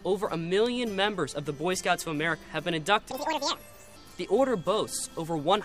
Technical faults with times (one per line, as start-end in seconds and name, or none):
3.11-3.96 audio read two samples at a time (double speed)